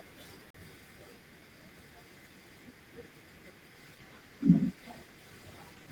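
At 0.50 s there's a CD skip: a brief tick, about 40 ms of silence, then the speech jumps to a different place as the laser lands on another turn of the spiral. From 3.76 s to the end, a call bitrate drop sets in, the encoder falling from 32 to 18 kbps, so the speech turns rougher and watery, with the top end dulled.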